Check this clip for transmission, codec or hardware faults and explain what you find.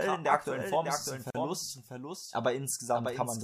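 Two faults are audible: a second copy of the whole signal running behind the original, and a short dropout at a join between separately encoded segments.

Doubled audio track, throughout: a full-band duplicate trails the original by roughly 0.7 s, sitting about 5 dB lower, with no reverberant tail or room colouring. This is likely a second capture path or misaligned edit layering two copies, heard as a dry, delayed echo.

Gap at a join of encoded pieces, 1.30 to 1.35 s, right after "ist es ein": a 42 ms silence cuts into continuous speech, then resumes where it left off. Segments, joined at 2 s spacing, were encoded separately, leaving encoder start delay and end-frame padding untrimmed. Edges are smeared by the codec.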